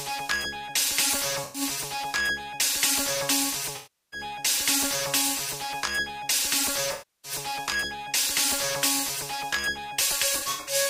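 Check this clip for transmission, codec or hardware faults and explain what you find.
AAC frame loss with concealment appears four times, at 1.44 s, 3.76 s, 6.92 s and 10.37 s. The decoder lost blocks of frames and rebuilt the gaps from the last good spectrum. That leaves smeared, noisy patches of about 0.11 s, 0.36 s and 0.32 s. The last loss covers about 0.19 s, scattered over 0.32 s in brief dropouts.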